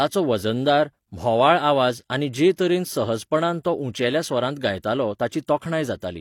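At 5.65 s the speech drops out for about 3 ms. This is a gap between stream segments. The audio arrives in one-second segments, and the timestamps of two neighbouring segments fail to meet. The player fills the missing stretch with silence. The hole is very short and has hard edges, so it sounds like a brief interruption rather than a pause. No speech is lost, since the silence is added between segments.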